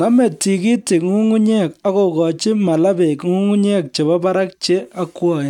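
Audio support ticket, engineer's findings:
No faults found in clip.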